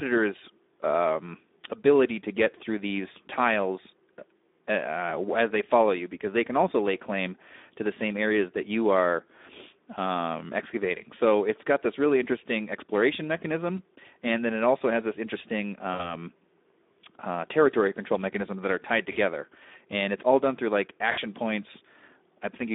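Speex codec damage runs through the whole speech clip. The narrowband CELP coder gives its excitation too few bits, so the voice sounds plainly hoarse and noisy. The audio is confined to roughly 250 Hz to 3.7 kHz, which gives it a thin telephone-line sound. The amount of roughness points to a low-to-middle setting around 11 kbps.

VoIP packet loss concealed by the speech codec occurs at 15.93 to 16.13 s, 19.11 to 19.17 s and 21.11 to 21.19 s. The decoder fills each gap by extending its last pitch and filter while the gain drops. The sound smears and fades, and the voice stays weak and distorted briefly after the gap. The gaps sound like about 60, 40 and 60 ms of missing audio, which fits lost 20 ms frames.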